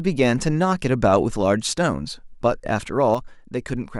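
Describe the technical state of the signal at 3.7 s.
At 3.7 s the signal sits inside a span from 3.15 s to the end of the clip where the speech level falls abruptly by about 6 dB and stays down. The likely cause is one channel drops out: with one stereo side lost, the mono sum carries only half of the shared speech.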